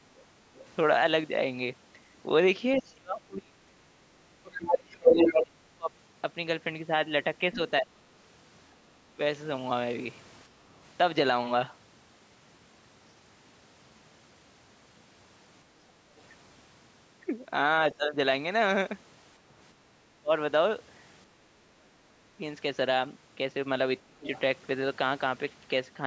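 From 0.56 to 7.7 s, a second voice comes through, most likely because the echo canceller failed to strip the loudspeaker's playback from the microphone. This is the other side's voice leaking through, and it runs a little louder than the talker.

Overlapping it, from 2.79 to 9.19 s, the talker's own speech dips and breaks up in pieces, adding up to around two seconds and falling by as much as roughly 30 dB. This is speech suppressed in double talk, likely from the canceller turning everything down while both sides spoke.

At 10.49 to 10.66 s, the canceller clamps the microphone while the loudspeaker plays. The room sound drops by about 6 dB for 150 ms, then returns. This is background gated by the echo canceller.

From 17.95 to 24.27 s, the same suppression in double talk recurs, with the talker cutting out for about a second and a half in total and dropping deeply at worst, likely for the same reason. 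Right at its end, 24.23 to 24.39 s, a brief scrap of the other side leaks through, well below the talker's level, likely from echo escaping the canceller. Across the clip the call's microphone processing passes nothing above 8 kHz, which is normal.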